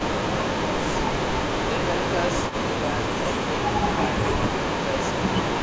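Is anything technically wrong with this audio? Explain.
Yes. Echo leak appears from 0.0 to 0.26 s and again from 2.31 to 2.58 s. A delayed copy of the speech returns, about 10 dB below it. The delays are 306 ms and 261 ms. The far end likely played the call on a loudspeaker, and its echo canceller let part of that through.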